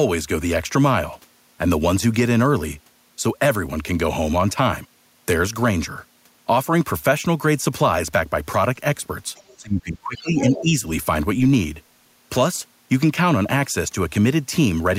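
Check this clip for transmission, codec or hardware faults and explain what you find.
Two related faults cluster between 9.4 and 10.8 seconds, both pointing to echo cancellation struggling during a stretch of overlapping talk.

Other side's voice leaking through, 9.36 to 9.57 s and 10.36 to 10.63 s: a second voice surfaces, faint at first (about 30 dB below the speech) and then much louder (about 15 dB below). It is likely loudspeaker echo the canceller failed to remove. Because it is a separate voice, it differs from reverb or a smeared copy of the talker.

Speech suppressed in double talk, 9.57 to 10.4 s and 10.61 to 10.76 s: the talker's own level drops, by roughly 20 dB in the first span and about 10 dB in the second, across under a second in total. The likely cause is the canceller turning everything down while both sides spoke. This dip tracks the competing voice, which separates it from an ordinary dropout or packet loss.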